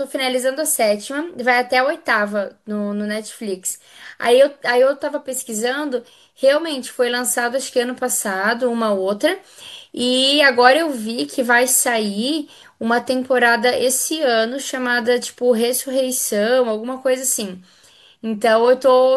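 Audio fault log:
Nothing in this bit of speech catches the ear as a technical problem, so there's nothing to log.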